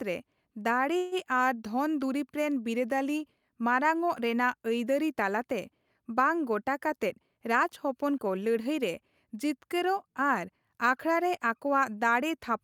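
At 0.97 s the speech stops moving and a short buzzy continuation of the last sound fills about 143 ms until 1.15 s, when the audio carries on from where it paused with nothing lost. This is a call audio freeze. The likely cause is packets held up in transit so that the jitter buffer ran dry, with the receiver extending the final sound to cover the wait. The result is a delay added to everything that follows.

From 7.09 s to 8.82 s the speech runs noticeably hurried, about 8% faster than normal while keeping the same pitch. This jitter buffer speed-up happens when the buffer has built up more audio than it aims to hold, as when delayed packets arrive in a bunch. To bring the delay back down, the receiver repeatedly cut out tiny pitch-period-sized slices, removing roughly 150 ms in total over that stretch.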